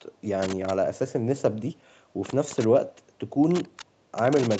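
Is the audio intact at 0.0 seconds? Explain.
Yes, the speech is intact at 0.0 seconds, with no fault at that moment.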